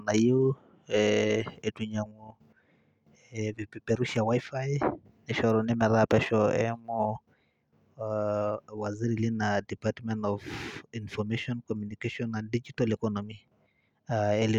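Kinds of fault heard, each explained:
Dropped samples: single clicks at 4.16 s and 11.38 s, likely from a handful of missing samples, making the waveform jump abruptly.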